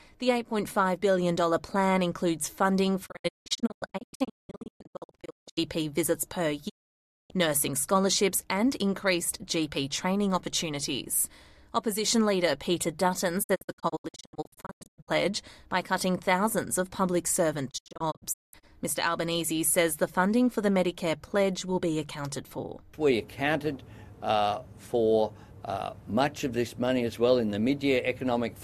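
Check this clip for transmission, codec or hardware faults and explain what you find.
Four digital broadcast dropouts occur, at 3.05–5.59 s, 6.68–7.32 s, 13.42–15.09 s and 17.69–18.65 s. In each one the receiver mutes during corrupted frames, leaving 20 ms fades into true silence. The 6.68 s event is a single 0.6 s hole. The others are clusters of short gaps, with the longest 0.19 s. Unlike concealment or analogue fading, nothing is smeared, repeated or hissed over. The missing audio simply vanishes.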